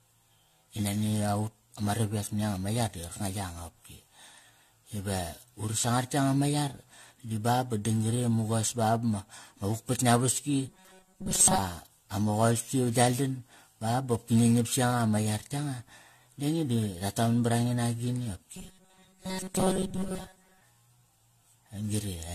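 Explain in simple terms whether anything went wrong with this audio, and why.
Throughout the recording, the speech sounds swirly, hollow and smeared, with blunted consonant attacks and nothing above about 14 kHz. That is generation loss: the audio was likely compressed and decompressed around seven times, and each pass added fresh damage.

From 10.68 to 11.58 s and again from 18.55 to 20.61 s, the speech turns into a rigid, metallic buzz at about 188 Hz. This is robotic sound from repeated short buffers: new audio likely arrived too slowly, so the player kept repeating a tiny slice of roughly 5 ms for most of those stretches.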